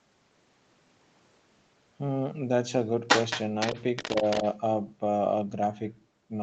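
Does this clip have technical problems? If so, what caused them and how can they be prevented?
Yes. From 3.08 to 4.43 s the other side's voice leaks through, only a little quieter than the main speech, likely because the echo canceller left the loudspeaker playback in the microphone signal. A headset, or a quieter loudspeaker placed further from the microphone, prevents it.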